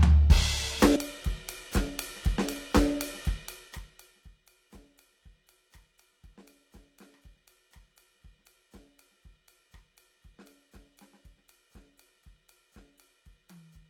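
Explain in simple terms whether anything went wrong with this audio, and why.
A brief squawk or blip in the music at 0.92 to 0.96 s is damaged data in a compressed stream: corrupted bytes made the decoder lose its place.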